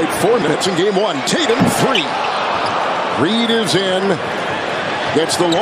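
At 0.42 to 0.54 s, and again at 4.32 to 4.44 s, chunks play out of order. Two 60 ms chunks swap places, the late one following its successor. Nothing is lost. Each swap leaves three hard joins, heard as a brief jumbled stutter.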